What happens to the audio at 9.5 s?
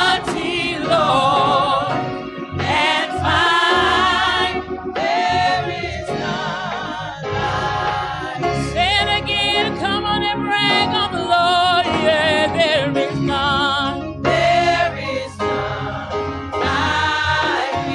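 A single sharp tick lands at 9.51 s, instantaneous and broadband, with no relation to the surrounding sound. It peaks at about -21 dBFS. This is a bit error spike. One flipped bit, in memory or on a digital link, knocked the value of a couple of adjacent samples off by a power of two before it snapped straight back. The error lasts far less than a millisecond, which is why it registers only as a tick.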